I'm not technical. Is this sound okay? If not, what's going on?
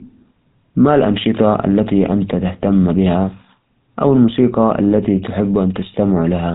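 No. The GSM full-rate codec is at work from start to finish, giving the speech a plainly audible buzzy, gravelly roughness. This is the old mobile-phone voice codec. It doesn't store the sound itself. It stores a rough model of the mouth and throat, driven by a thinned-out stream of regular pulses, and rebuilds the speech from that. Detail gets lost, and nothing above about 3.8 kHz survives, so the speech also sounds narrow and muffled.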